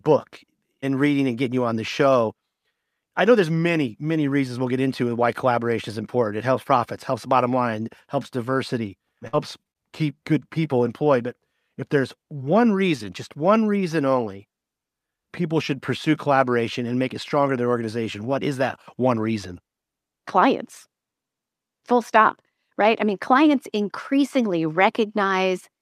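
At 9.27 to 9.35 s, right after "bottom line helps diversity", a burst of packet loss drops about 60 ms of speech. The receiver stretches the last sound for about 55 ms, fading it down, then jumps ahead. What sets it apart is that the speech resumes later in the sentence with material missing, not blended back in place.

Just before "keep good people employed", two short concealed packet losses follow at 9.63 to 9.67 s and 9.71 to 9.77 s. About 20 ms and 40 ms are patched from the preceding sound and then crossfaded into the real audio. They come across as quick smears rather than a held tail.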